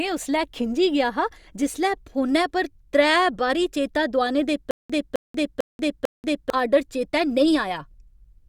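After "बारी चेता दुआने दे", from 4.71 to 6.50 s, a 262 ms fragment repeats four times between 186 ms silences. This stutter with silent gaps was likely caused by a stalled stream replaying its buffer.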